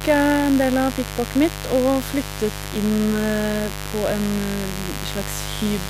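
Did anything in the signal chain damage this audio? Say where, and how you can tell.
Yes. Mains buzz from the analogue wiring runs through the whole speech clip: a steady, raspy buzz about 10 dB below the speech, built on 50 Hz harmonics reaching several kilohertz. A dimmer, rectifier or missing shield injects switching spikes twice per mains cycle.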